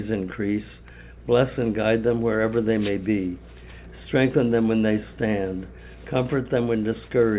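No faults are audible; the band stops at 4 kHz with the light coding noise expected of the call path, consistent with G.711 A-law at 64 kbps.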